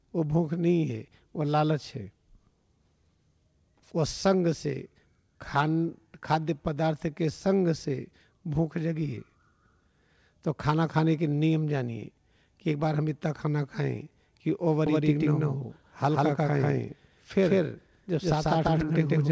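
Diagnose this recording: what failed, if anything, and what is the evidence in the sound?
From 14.86 s to the end there's a doubled audio track: a dry, full-band copy trails about 150 ms behind at roughly equal level, cutting in abruptly. Both copies share the 8 kHz ceiling of the G.722 call path. Likely cause: a second, slower capture path or an edit holding two out-of-step copies.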